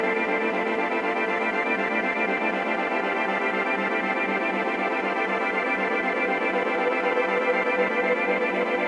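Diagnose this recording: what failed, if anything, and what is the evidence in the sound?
Nothing in this music recording points to a failure anywhere along the chain, so there's no fault to diagnose here.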